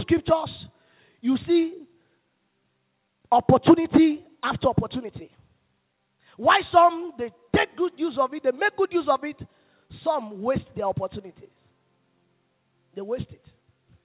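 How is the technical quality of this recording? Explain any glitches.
Nothing stood out on listening; the sound comes across as a normal narrowband call, with no content above about 4 kHz, which fits a 64 kbps G.711 mu-law call path, and no glitches to point to.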